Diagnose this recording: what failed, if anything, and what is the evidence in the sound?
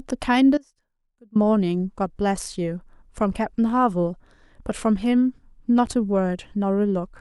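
An audio dropout to a faint residue runs from 0.58 s to 1.35 s, about 780 ms. The speech cuts off abruptly mid-flow and returns just as suddenly. Through the gap a faint sound remains, roughly 25 dB below the normal signal level. That residue shows the path after the break stayed live, which points to a likely interruption in the analogue wiring or feed upstream of the converter. A pause or fade would not switch this sharply.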